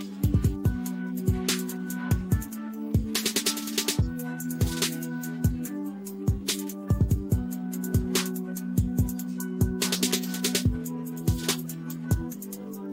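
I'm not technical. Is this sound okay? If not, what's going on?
Yes, nothing in the recording sounds technically broken or damaged at any point.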